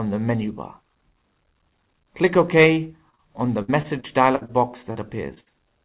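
Audio packets arrived too late or not at all at 2.74 to 2.78 s, and twice back to back at 3.10 to 3.15 s and 3.15 to 3.20 s. Each time the receiver covered the hole with about 20 to 40 ms of continued sound. These are short concealed packet losses. Each one is a brief smear or wobble where the signal repeats itself, and the pair near 3.1 s runs together into one slightly longer wobble.

From 3.62 to 4.51 s the stream kept dropping packets, producing repeated packet loss (robotic sound). Five separate gaps, the longest 62 ms, swallowed about 0.22 s of real audio, so roughly a quarter of that stretch is patched continuation. Because each patch is followed soon by the next, the sound turns choppy, with pieces missing.

Two more short concealed losses follow, at 4.93 to 4.97 s and 5.35 to 5.38 s. Each is about 20 ms of filled sound and heard as a tiny glitch.

Right after, from 5.40 to 5.48 s, comes a burst of packet loss. 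Several consecutive packets, 60 ms of audio in all, never made it in time. The receiver stretched the last sound and faded it, so there is a held, dimming buzz or hiss, and then the audio jumps ahead with that portion gone.

Throughout, the call path passes nothing above 4 kHz, which points to G.711 A-law at 64 kbps.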